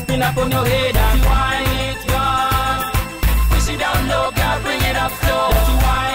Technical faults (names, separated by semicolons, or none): switching supply whistle